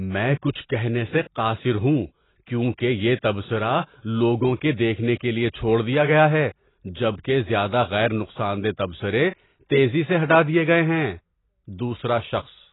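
AAC compression runs throughout the speech, from start to finish. Nothing is heard above about 3.9 kHz, so sibilants lose their edge and the speech sounds dull and boxed-in, with a smeared, warbling texture on sustained sounds and a fizzy grain in what remains of the consonants. This is likely heavy AAC-LC coding, which fits a bitrate of around 16 kbps. At that rate the encoder drops the upper spectrum and quantises the remaining bands coarsely.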